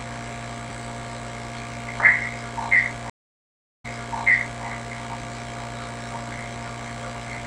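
From 3.10 to 4.65 s, a stream reconnect silences the audio for 0.69 s, then resumes 0.86 s earlier and repeats audio, unlike a simple dropout.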